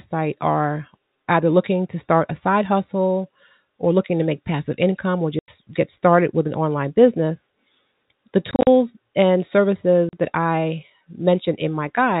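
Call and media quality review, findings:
Packet loss filled with silence: dead gaps at 5.39–5.48 s (90 ms, after "make passive income or"), 8.51–8.67 s (100 ms scattered, runs up to 40 ms), and 10.09–10.13 s (40 ms, before "that I"). They have hard edges rather than the repeated or smeared sound of concealment, and gap lengths in multiples that fit 10 ms packets. The G.711 telephone band itself is intact.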